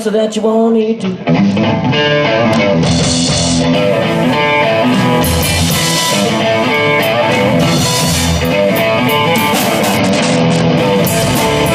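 Twice the Bluetooth link appears to congest, and the sender answers with a Bluetooth SBC bit pool drop, from 0.81 to 3.75 s and again from 9.92 to 10.77 s. The starved encoder gives the top sub-bands almost nothing and quantises the rest coarsely, so the audio loses its treble and takes on a gritty grain until the rate recovers. The depth of the dulling fits a bit pool falling from 28 to 9, about 78 kbps.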